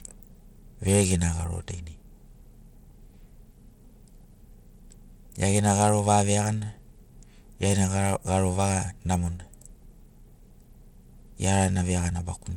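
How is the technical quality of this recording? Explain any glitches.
The recording is compromised by audible codec damage across the whole speech clip. Throughout, the sound is likely Bluetooth SBC compression, consistent with a starved bitrate near 96 kbps: coarse sub-band quantisation leaves the treble flickering, with gritty noise and aliasing riding on it. A spectrogram shows patchy, blocky upper bands and empty space above 19.8 kHz.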